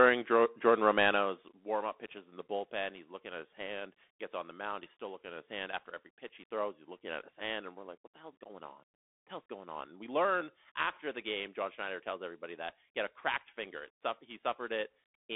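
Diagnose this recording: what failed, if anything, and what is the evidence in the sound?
Bluetooth CVSD headset codec damage runs through the whole speech clip, at the codec stage. The band is confined to about 250 Hz to 3.5 kHz with nothing above 3.8 kHz, and the coding artefacts are plainly audible: a granular hiss under the speech, scratchy s sounds, and roughness on loud high-frequency bursts where the one-bit delta modulator's adaptive step can't keep up. The sound fits a 64 kbit/s CVSD link.

Zipper noise appears from 1.1 to 1.6 s, at the driver or buffer stage where gain is applied. The level drops by roughly 10 dB over that half second, but in discrete steps at around fifty a second rather than as a continuous ramp. Each unsmoothed jump puts a small discontinuity in the waveform, so a fast ticking buzz rides on the speech while the level falls.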